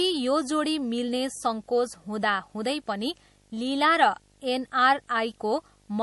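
From start to finish the speech carries video or display buzz, where a screen or video cable has coupled into the audio path. It shows up as a steady 50 Hz buzz at the picture's field rate with a gritty hash layered above it, plus a thin, very high tone at the 15.6 kHz line rate. The interference sits well below the speech, roughly 35 dB down, but it is constant.

The whole clip also has plainly audible coding damage, most likely MP3 compression at a low bitrate, which fits something around 48 kbps. The speech content has nothing above 11.5 kHz, where the encoder cut its top band to save bits. Quieter spectral detail drops in and out between frames, giving the speech a watery, swirling texture. Sibilants turn metallic and chirpy, and consonant onsets sound smeared rather than crisp.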